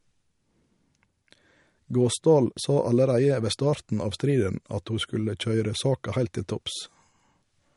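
The speech sounds watery and swirly from start to finish, with a dull top end: nothing comes through above about 11.2 kHz, and s sounds carry a metallic chirp as fine detail flickers in and out. This is likely MP3 compression at a low bitrate, around 49 kbps by the sound of it, where the encoder runs short of bits, cuts the treble at a fixed point and drops weaker frequency lines frame by frame.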